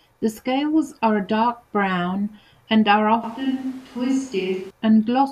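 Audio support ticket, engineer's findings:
3.24 to 4.71 s, right after "dark brown and are": switch to a distant microphone. The sound turns roomy and hollow with a thinner low end, the level drops about 5 dB, and room noise rises to roughly 25 dB below the speech. Likely cause is a close-mic dropout with fallback to a camera or room pickup. Unlike added reverb or an EQ change, it cuts in and out abruptly, and the noise floor jumps with it.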